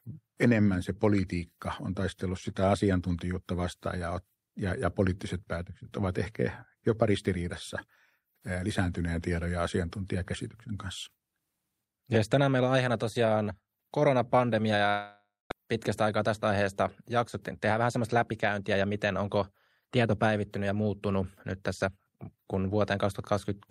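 Just after "on aiheena tosiaan koronapandemia", from 14.89 to 15.52 s, the speech breaks into a fading buzzy continuation of the last sound, which decays into about 200 ms of silence before the talker returns with part of the utterance gone. This is likely a long network dropout. Roughly 500 ms of audio never arrived, the receiver padded about 620 ms with concealment, and playback resumed around a tenth of a second later than before.

Between 17.70 and 18.83 s, after "aiheesta jaksottiin" and leading into "miten onko tieto päivittynyt", the speech sounds briefly rushed, running about 7% fast while the pitch stays unchanged. This is a jitter buffer speed-up. The buffer had grown past its target, so the receiver trimmed many short pitch-period-sized pieces in succession, removing around a tenth of a second to pull the delay back down.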